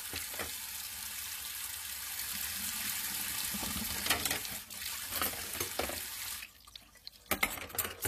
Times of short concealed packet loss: none

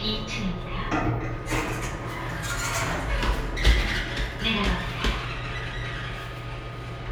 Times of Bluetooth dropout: none

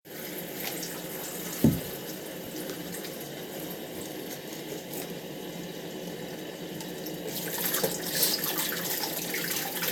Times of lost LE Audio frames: 2.45-2.47

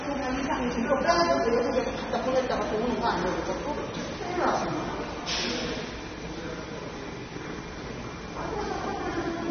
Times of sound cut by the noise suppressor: none

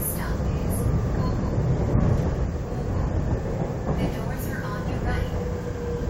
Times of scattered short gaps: none

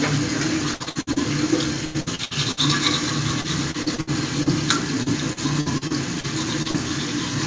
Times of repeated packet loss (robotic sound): 0.74-1.19, 1.85-2.60, 3.41-4.49, 5.03-6.26

